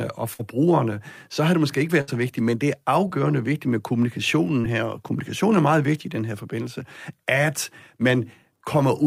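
At 0.33 to 0.41 s and again at 2.01 to 2.09 s, a burst of packet loss hits the speech. The receiver stretches the last sound for about 56 and 64 ms, fading it, then skips about 60 ms. On a spectrogram this shows as a flat, dimming stretch followed by an abrupt jump in the pattern.

Shorter, concealed packet loss follows at 3.07 to 3.11 s and 4.61 to 4.66 s, where about 20 ms went missing. The receiver patches it with 17 and 26 ms of continued sound, heard as a brief smear. The waveform shows a small smoothed patch blending back in.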